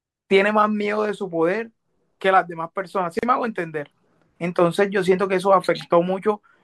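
At 3.19 s the speech stops for about 37 ms, a gap at a join of encoded pieces. Encoder delay and end padding left silence between segments, which points to pieces about 4 s long. Unlike a dropout, nothing is lost: the speech resumes exactly where it stopped.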